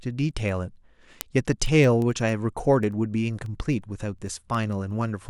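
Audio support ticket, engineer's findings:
Word clock ticks, 0.13–5.27 s, roughly every 0.1 s. Digital receiver not locked to sender clock, around 200 ppm apart; one sample dropped or repeated per tick.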